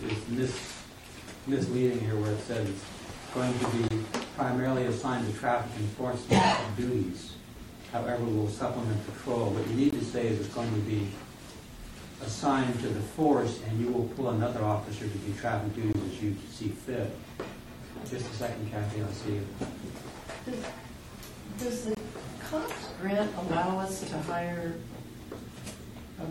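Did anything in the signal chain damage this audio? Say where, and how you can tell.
Yes. The damage happened where the audio was split into chunks for storage or playback, and each join came back with a gap between chunks. The chunks are 6 seconds long, and at every boundary about 21 ms of silence was inserted, from padding or a late chunk start. You hear short holes at 3.88–3.90, 9.90–9.93, 15.93–15.95 and 21.95–21.97 s. Their exact 6-second spacing points to chunking rather than random dropouts.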